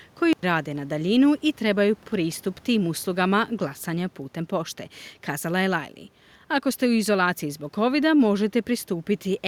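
A recording of speech, and no technical fault can be heard anywhere in it. Nothing in the sound points to a problem in how it was captured, processed or played back.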